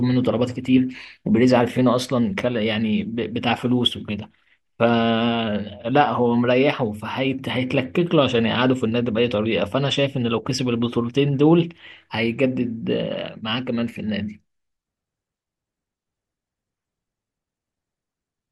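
A listener hears a speech recording whose signal carries no audible technical faults at any point.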